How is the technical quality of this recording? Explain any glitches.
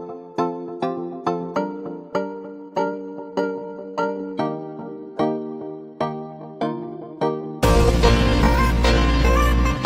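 The recording has one clear fault: a time-stretched section running from about 2.62 s to the end. At that point the pace abruptly drops to roughly 0.73 times normal speed while the pitch stays the same, and the audio drags. The likely cause is software slowing part of the audio to fill a length, repeating short fragments to stretch time without lowering the pitch.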